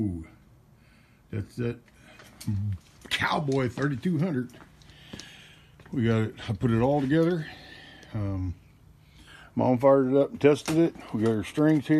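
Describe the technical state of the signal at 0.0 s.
At 0.0 s the audio is intact, with no audible fault.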